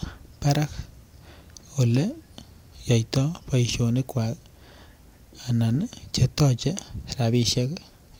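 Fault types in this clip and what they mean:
No faults detected in the speech; nothing to list.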